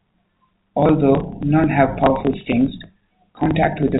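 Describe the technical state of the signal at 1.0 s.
At 1.0 s the speech is intact, with no fault present, carried through normally working G.711 telephone coding that keeps everything below its 4 kHz ceiling.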